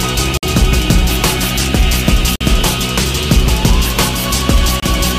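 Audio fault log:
0.37–0.43 s, 2.36–2.41 s, 4.80–4.83 s, Bluetooth stall: the sound drops to dead silence three times, for about 55 ms, 51 ms and then a shorter 26 ms, before picking back up. These are likely wireless dropouts. Interference delays the packets, the headphones' buffer runs empty, and playback simply halts until the resent data shows up. That's why you get clean holes rather than crackle or distortion.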